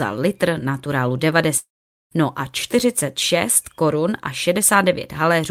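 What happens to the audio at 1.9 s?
From 1.57 to 2.14 s the speech decays into a fading buzz, then 450 ms of silence. This is likely a long network dropout. Unlike a brief packet-loss glitch, the 540 ms of lost audio never returns.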